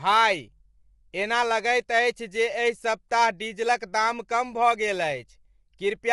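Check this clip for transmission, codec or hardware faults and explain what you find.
One codec fault runs through the whole clip. Low-delay AAC compression, throughout: the speech sounds rough and grainy, with nothing above 11.6 kHz, likely from short-frame AAC-ELD at a low rate of about 32 kbps.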